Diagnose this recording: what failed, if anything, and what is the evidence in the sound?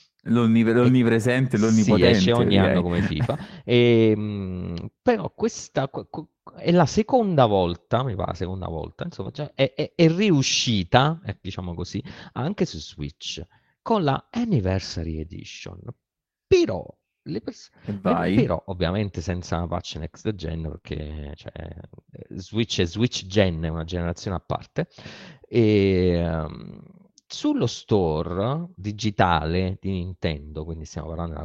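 The network path dropped packets, and the receiver recovered most of them as lost packets rebuilt from error correction. Each following packet carried a low-bitrate duplicate of the missing one, and the decoder played that copy, so the speech never breaks. Instead it turns briefly grainy at 1.61–1.71 s (60 ms, consistent with three consecutive 20 ms packets) and for about 20 ms each at 9.25, 10.77, 12.81, 14.91 and 20.73 s.

Where no redundant copy arrived, the receiver fell back on short concealed packet loss. It extrapolated the last speech, continuing its pitch or shaping noise, and then crossfaded into the real audio. At 9.23–9.27 s about 13 ms was synthesised, and at 20.77–20.85 s two back-to-back fills of about 22 ms each follow the rebuilt frame at 20.73 s. These are heard as a brief smear or wobble where a short consonant can disappear.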